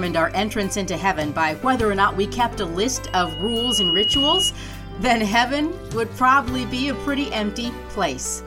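At 3.05 s a loudspeaker feedback squeal starts. A microphone is hearing the speaker it drives. At 2.9 kHz the loop gain goes above one, so that tone keeps feeding itself. It swells from nothing to a piercing whistle in under a second. At its peak it sits a few decibels above the rest of the sound. It holds as a single steady pitch. At 4.52 s it stops, as the loop is broken.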